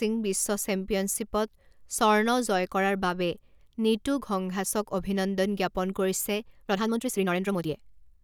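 From 6.46 s to the end, right after "ঘংঘাছক অভিনন্দন জ্ঞাপন কৰিছে", the speech suddenly rushes ahead at 1.68 times its pace, with pitch unchanged. This is likely a time-stretched section, compressed to fit by discarding short slices of audio.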